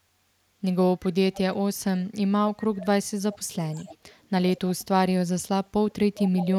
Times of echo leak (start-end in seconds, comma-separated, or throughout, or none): 1.33-1.40, 2.61-2.86, 3.32-4.27, 4.55-4.85, 6.13-6.48